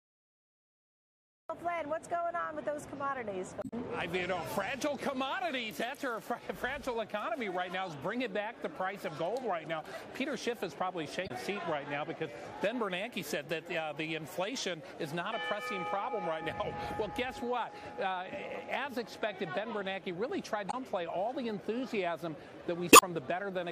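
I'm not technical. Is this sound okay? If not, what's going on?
No, not quite. There are four brief glitches: a little chirp or squawk at about 3.59, 11.24, 20.67 and 22.89 seconds, each lasting well under a fifth of a second. That's damaged data in a compressed stream. A few bits of the file got scrambled, so the player briefly can't make sense of them, loses its place, and hunts for the next piece it can read. That stumble is the blip you hear.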